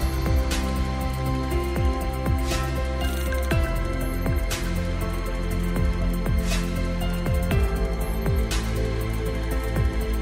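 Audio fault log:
Nothing to log here; I listened all the way and didn't hear anything go wrong.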